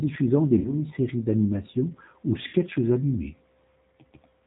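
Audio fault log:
Throughout: G.729 codec. The speech is band-limited below 4 kHz and has a plainly audible rough, synthetic edge. The decoder rebuilds each 10 ms frame from a vocal tract filter, a pitch predictor and a few pulses, which fits 8 kbit/s G.729A.
0.59–0.74 s and 2.47–2.56 s: VoIP packet loss concealed by the speech codec. About 60 ms of audio is missing at each point, which points to two lost packets. The first comes just before "séries d'animation ou" and the second just after it. The decoder stretches its last pitch and filter into a fading buzzy tone or coloured noise, and the speech stays weak briefly after recovery.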